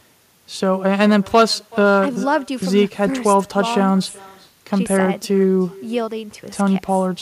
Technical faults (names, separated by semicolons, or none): echo with no canceller